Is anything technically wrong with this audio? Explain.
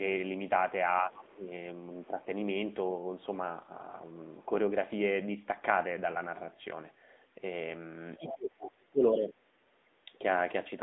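Yes. Throughout, the speech sounds band-limited and plainly buzzy and synthetic, with nothing above 3.8 kHz. That is the AMR narrowband mobile codec, whose coarse vocal-tract modelling fits a mid-rate mode near 10.2 kbps.

From 1.33 to 1.47 s the speech dips by about 10 dB. From 8.18 to 9.36 s it drops much further, by up to about 30 dB. This is likely speech suppressed in double talk: the echo canceller turned the talker down while the far side spoke.

From 8.17 to 8.34 s a second, quieter voice comes through, about 10 dB below the speech. This is the other side's voice leaking through, most likely loudspeaker echo the canceller failed to remove.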